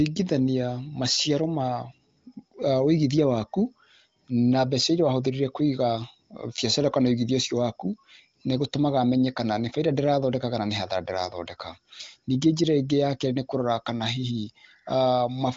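No technical faults can be heard in this clip.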